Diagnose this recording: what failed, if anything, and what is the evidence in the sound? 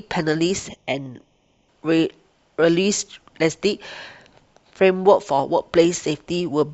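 A channel delay producing comb filtering affects the speech from 0.69 s to 1.69 s, most likely at the driver or buffer stage where the two channels are summed to mono. During that second the sound turns hollow and phasey, then returns to full tone. One channel trails the other by roughly a third of a millisecond, so the shared content cancels around 1.5 kHz and at evenly spaced intervals above it. A spectrogram would show those fixed dark horizontal notch bands only within that span.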